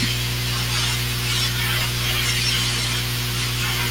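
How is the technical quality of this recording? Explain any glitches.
The recording has a serious fault. Mains hum runs through the whole speech clip. It is a steady 60 Hz tone with low harmonics, roughly as loud as the speech itself. A ground loop or a nearby transformer lets the power line leak into the signal.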